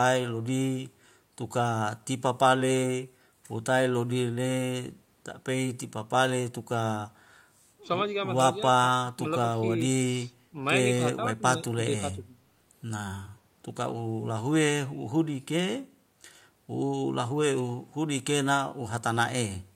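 No technical faults are audible anywhere in this speech.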